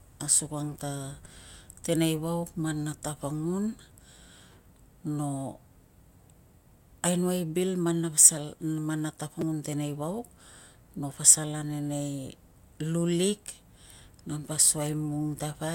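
Repeated buffer at 1.25 s, after "asukang ta", and at 9.41 s, after "na pasal man na": late audio made the device replay a roughly 5 ms buffer once, then twice, heard as brief clicks.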